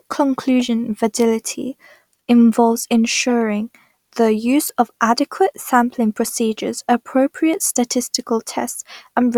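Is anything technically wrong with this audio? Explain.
Yes. Four short chirps cut into the speech at 0.60–0.62 s, 3.30–3.32 s, 4.67–4.70 s and 8.67–8.72 s, each a brief squeak or burst of noise peaking at roughly −20, −15, −10 and −15 dBFS. This is a corrupt frame decoded: flipped bits inside compressed frames were decoded as if valid, so misread gains and codes placed energy at wrong frequencies. Each glitch spans a couple of frames, the last about three.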